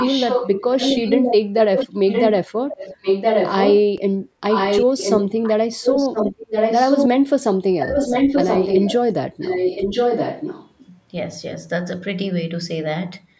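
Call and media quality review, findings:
Echo leak, 0.0–2.34 s, 2.7–3.8 s, 4.5–7.08 s, 7.8–8.97 s, 9.4–10.71 s. Speech repeated about 1.02 s late at roughly the same level as the direct voice. Likely cause: far-end loudspeaker pickup escaping the echo canceller. On a spectrogram, matching harmonic and formant patterns are offset about 1 s. On the waveform, the envelopes are duplicated and shifted.

DC step, 3.98 s. Low thump. The waveform baseline jumps off zero, then drifts back with a time constant of about 30 ms, consistent with a 5 Hz high-pass. The spectrogram shows a brief low-frequency smear at the step. The speech itself continues unchanged. Content above 8 kHz is absent, consistent with the call band limit.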